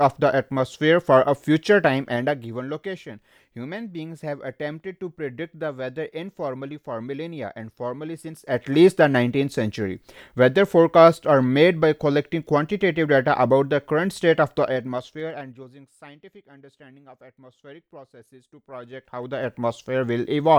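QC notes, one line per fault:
1.80–2.66 s: zipper noise. Level drops about 10 dB in steps of about 2 dB, roughly seven a second. Each step ticks, unlike a smooth fade.
8.34–8.68 s: zipper noise. A fast rise of about 10 dB in steps of about 2 dB, around twenty a second, gives a brief buzzy zip rather than a clean swell.
14.60–15.92 s: zipper noise. Level falls about 25 dB in steps of about 2 dB, roughly ten a second. The ticking rides on the sound, which a smooth fader move would not cause.
18.48–19.70 s: zipper noise. Level climbs about 25 dB in steps of about 2 dB, roughly ten a second. The audible ticks mark unsmoothed gain steps, not a gradual fade-in.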